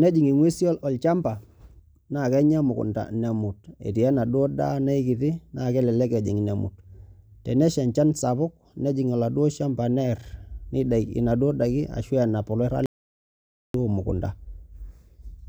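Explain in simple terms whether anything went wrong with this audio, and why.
At 12.86 s the speech cuts to dead silence for about 0.88 s, until 13.74 s. This audio dropout to silence likely came from a briefly lost input.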